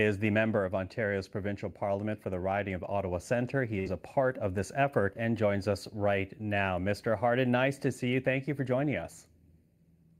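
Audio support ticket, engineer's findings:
Held, fading sound 3.79–3.89 s, then speech resumes further on. Burst of packet loss: receiver concealment stretched the last audio 62 ms; 60 ms of speech lost.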